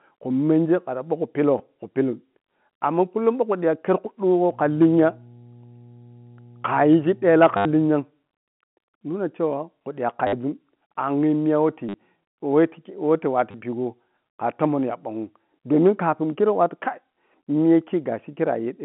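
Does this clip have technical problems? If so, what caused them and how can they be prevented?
Yes. Packet loss with the last packet repeated causes five short robotic stutters, at 1.58–1.60 s (just before "khu pillun"), 7.57–7.65 s, 10.27–10.33 s (before "zun angyi miya"), 11.89–11.94 s, and 13.51–13.54 s (before "pigho kha tomon ya"). These gaps run 20 to 80 ms, and the receiver filled each one by replaying the last packet it had. Those replays seldom align with the pitch cycle. The longer runs buzz near 100 Hz, which fits 10 ms packets. The G.711 line limits the band to 150–3400 Hz throughout. To prevent this, use a larger adaptive jitter buffer and waveform-matched concealment that fades out instead of looping, and reduce network loss with prioritised voice traffic or forward error correction.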